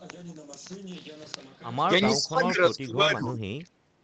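From 2.15 to 3.7 s the speech is pushed down hard, by around 25 dB at its deepest, then recovers before a second short dip at 3.88 to 3.98 s. This is speech suppressed in double talk: likely the echo canceller, faced with both ends talking at once, could not tell the near talker from loudspeaker echo and attenuated everything. It is heard through an 8 kHz-wide call codec consistent with Opus.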